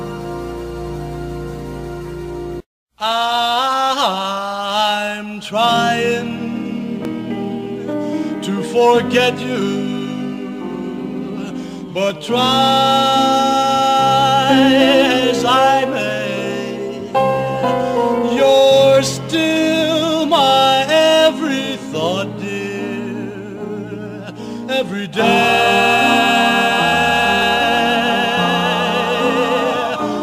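Short forward skips at 7.05, 9.62, 12.10 and 27.42 s, each losing roughly 5 to 15 ms, point to likely dropped buffers (overrun) splicing audio.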